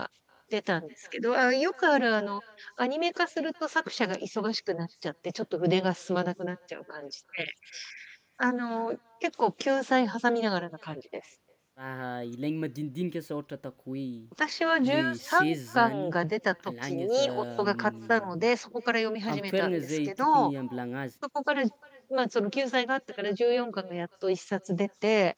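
Throughout the speech, an echo with no canceller trails each phrase by roughly 0.4 s, at about 28 dB below the talker: the far end's loudspeaker feeds its microphone and nothing removes it. Unlike room reverberation, this is a distinct, thin, delayed repeat rather than a smooth tail.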